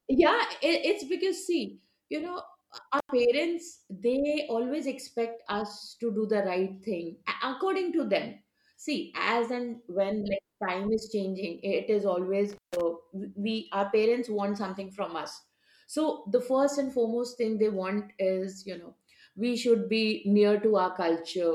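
Speech with intermittent contact at 2.99–3.11 s and 12.50–12.81 s: a loose connection opens for 90 ms, then 148 ms, cutting the sound with edge crackle.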